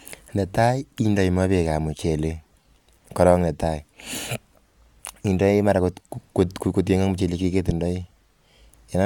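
No technical faults occur at any point in the speech, so there is nothing to describe in time order.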